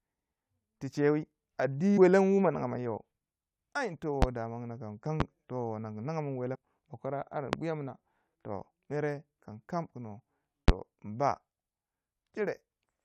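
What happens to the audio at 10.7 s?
At 10.68 to 10.71 s a single loud pop cuts through the speech, standing roughly 25 dB above the surrounding level for about 30 ms while the talking continues beneath it. The likely cause is a sudden voltage step or pulse, such as a plug, switch, static discharge or driver glitch, shaped by the downstream circuitry. On a waveform it appears as one tall, narrow spike; on a spectrogram, a thin vertical stripe spanning nearly all frequencies.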